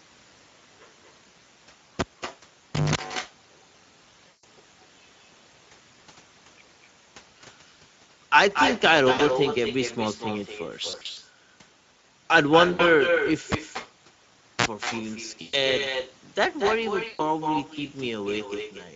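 It's a speech recording of a call, and the whole thing has echo with no canceller. A quieter, thinner copy of the talker trails everything by roughly a fifth of a second, at about 6 dB below the direct sound. That's the far end's loudspeaker feeding its own microphone with nothing cancelling it. The Speex codec damage is plainly audible throughout: hoarse, noisy voicing and a hissy, synthetic-sounding top end. That points to a bitrate of something around 17 kbps, where the excitation is starved of bits. There are two cable pulled and plugged in events. The first, from 1.99 to 2.95 s, has a pop, about 0.9 s of near silence, a 180 ms burst of 50 Hz mains buzz as the tip touches, then another pop. The second, from 13.52 to 14.66 s, has about 1.1 s dead and a short 47 ms blip of 60 Hz buzz before the return pop. VoIP packet loss concealed by the speech codec turns up at 4.27 s (160 ms), 9.11 s (80 ms), 10.89 to 11.2 s (scattered gaps, longest 60 ms), 12.73 s (60 ms), 15.41 s (120 ms) and 17.07 s (120 ms). 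Each time the decoder stretches the last sound into a fading buzzy tone or coloured noise, and the voice stays weak briefly afterwards.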